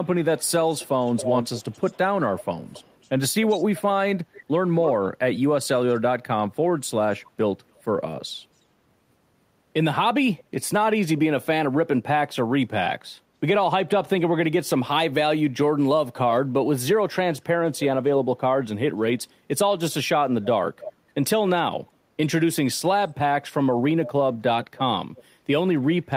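Echo leak runs through the speech at 0.03–5.09 s, 7.24–8.26 s, 10.39–10.43 s, 17.38–17.84 s, 20.43–20.92 s, 24.05–24.1 s and 24.64–25.23 s. A quieter copy trails roughly 280 to 310 ms behind. It is loudest in the opening stretch and much fainter later. It's likely a loudspeaker on the far end whose echo canceller let some pickup back through.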